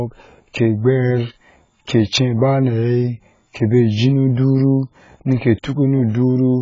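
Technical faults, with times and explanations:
Throughout: AAC compression, likely at a very low bitrate; nothing above 7.6 kHz, and sibilants warble and smear, unlike a clean low-pass filter's plain dullness.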